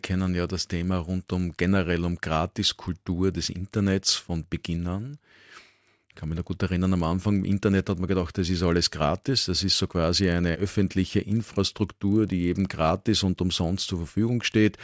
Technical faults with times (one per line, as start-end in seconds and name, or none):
0.00-14.83 resampler restarted on every block